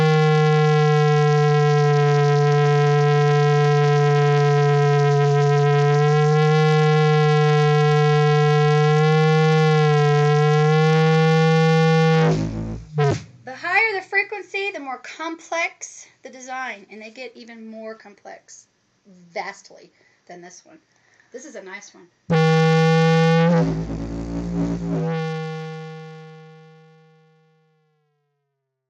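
Nothing here sounds wrong, and the gentle ease-down in level over the last few seconds is just a deliberate editor's touch at the end.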